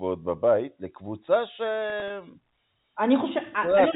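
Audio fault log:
1.90–2.10 s, packet loss with pitch repetition: about 60 ms lost in short gaps of up to 20 ms, scattered across 200 ms, which fits three dropped 20 ms packets. The receiver filled each gap by repeating the last pitch period, so it comes across as brief held, buzzy blips rather than silence.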